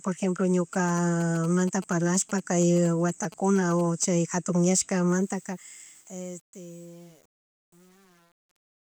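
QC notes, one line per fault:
0.73–4.05 s, GSM signalling bursts: a galloping dit-dit-dit of short buzzes at about 217 Hz, roughly 20 dB under the speech. A nearby 2G phone's signalling bursts are rectified by the audio circuit. Unlike steady mains hum, the buzz arrives in gated groups.
5.09–8.93 s, truncation distortion on a fade: as the speech fades out toward 8.94 s, it turns gritty, worst from 5.65 s onward. The fade stage keeps only 8 bits with no dither, so the quiet waveform collapses into a few square steps. Unlike hiss or codec smear, the grit follows the level down.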